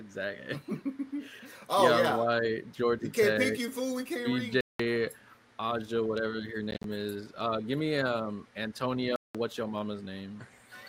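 At 4.61 s the sound cuts to silence for about 0.19 s, returns, then at 6.71 s breaks up into short gaps totalling 93 ms over 133 ms, the longest 53 ms, and at 9.16 s vanishes again for 0.19 s. These are likely Bluetooth dropouts, with packets arriving too late and being discarded. The gap sizes fit packets of roughly 13 ms. A spectrogram shows empty vertical bands, and the waveform resumes mid-stream, skipping ahead.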